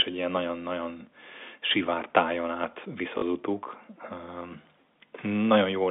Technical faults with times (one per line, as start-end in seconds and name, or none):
3.18-3.22 packet loss with last packet repeated